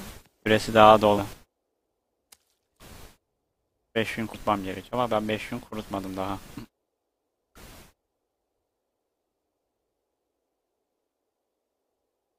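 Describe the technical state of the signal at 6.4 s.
At 6.4 s the sound sits inside a sustained level loss running from 1.33 s to the end of the clip: it fell abruptly by about 6 dB and stays there. The likely cause is one channel dropping out before the mono sum. Since both channels carried the same sound, the mono sum is only quieter and otherwise unchanged.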